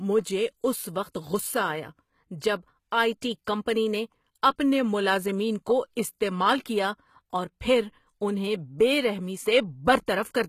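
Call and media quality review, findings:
HE-AAC compression, throughout. Treble bright but synthetic: sibilants gritty and metallic, harmonics misaligned above the crossover, nothing above 14.9 kHz. Likely an HE-AAC encode at a low rate, consistent with about 20 kbps. Upper band rebuilt by spectral band replication from copied lower bands, coarse envelope only.

Pre-echo, 10.06 s. Brief hiss of about 17 ms ahead of a sharp onset; attack softened, smeared. Same transform codec: block quantisation noise, sized for the loud attack, spreading into the quiet lead-in.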